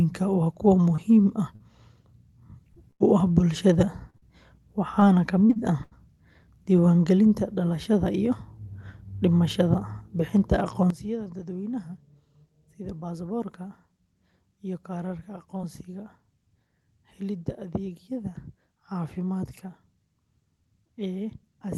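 Short concealed packet losses occur at 0.95–1.0 s, 1.56–1.62 s, 2.74–2.77 s and 4.10–4.15 s, with one more at 15.57–15.61 s. Each is a 20 to 40 ms hole that the receiver patched by extending the preceding sound before blending back in. They come across as a quick smear or wobble rather than an audible gap. That brevity, and the way the original sound returns almost seamlessly, separates them from the longer bursts.

A burst of packet loss at 2.91–3.02 s removes about 100 ms in one run. The concealment continues the last sound and lets it fade, so a held buzz or dying hiss fills the space and the audio resumes further along. A second, shorter burst at 4.17–4.24 s, about 40 ms, follows almost immediately after the 4.10 s dropout. Unlike the isolated smears, these leave a clear jump in continuity.

Repeated packet loss gives a robotic sound between 5.00 and 5.93 s. Four separate gaps, the longest about 79 ms, are concealed back to back, so roughly a seventh of that stretch is synthetic fill. 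The result is a choppy quality with fragments missing. What sets it apart from a single burst is the rapid recurrence: each patch barely settles before the next dropout begins.

At 10.90 s the level drops abruptly by about 12 dB and stays down until the end of the clip, with the background noise falling by the same amount. There is no ramp and no missing audio, only a step in loudness. That rules out packet loss, and the most likely explanation is a sudden gain jump applied digitally without smoothing. The Opus call path's top end, which stops around 12 kHz, is unaffected across the change.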